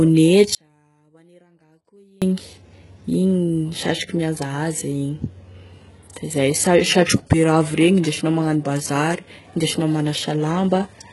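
Speech, and the whole clip carries the gritty, lispy treble and metallic s sounds of heavy HE-AAC compression, likely at a bitrate near 12 kbps. A spectrogram shows nothing above 11.5 kHz and a copied-looking upper band. From 0.55 to 2.22 s, an audio dropout to a faint residue leaves about 1.7 s of only faint sound roughly 35 dB down, likely from the signal being lost while the path after the break stayed live. The waveform shows an abrupt collapse and an equally sudden return. Just after "da izay sa", at 7.05 to 7.08 s, pre-echo spreads a 31 ms smear of hiss ahead of an attack, visible as a faint noise wedge before the onset.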